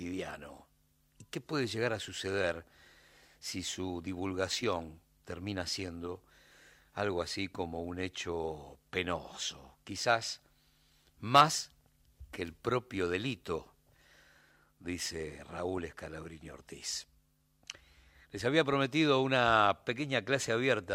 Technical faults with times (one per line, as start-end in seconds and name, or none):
15.77 DAB burbling
18.73 DAB burbling